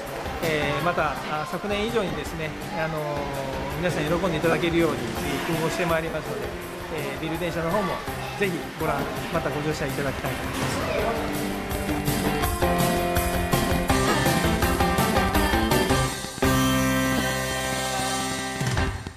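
Lost LE Audio frames come first, at 2.09 to 2.16 s. About 30 ms of audio is missing, scattered over 60 ms, with no gap much longer than 15 ms. At 4.52 s, 15 ms is lost. At 6.09 to 6.14 s, 45 ms is lost. These lengths fit 7.5 ms frames. In each gap the LC3 decoder repeats the last spectrum with random signs. Tones become a brief noisy smear.

From 10.19 s to 19.08 s a train of clicks runs over the sound. There are about fifty similar clicks, roughly 5.6 per second, spaced unevenly. They peak about 10 dB above the signal and tick through pauses too. Interference or a faulty connection or supply is the likely cause.

Over those clicks, lost LE Audio frames return. At 14.09 to 14.15 s, 52.5 ms is smeared. At 17.18 s, 15 ms is lost.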